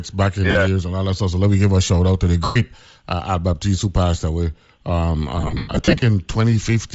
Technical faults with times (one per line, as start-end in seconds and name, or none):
0.00-6.94 Bluetooth LC3 compression
0.51-0.56 lost LE Audio frames
2.44-2.56 lost LE Audio frames
5.37-6.02 lost LE Audio frames